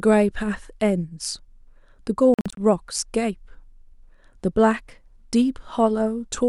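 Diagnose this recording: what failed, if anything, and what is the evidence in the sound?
Likely a Bluetooth dropout on the wireless link: late packets were discarded, leaving scattered silent gaps in the speech from 2.34 to 2.57 s, the longest 46 ms.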